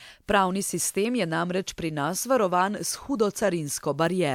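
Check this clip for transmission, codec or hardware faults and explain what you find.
Nothing in the signal points to a transmission, codec or hardware fault: the speech stays continuous and steady, with no dropouts, distortion or other disturbance anywhere in the clip.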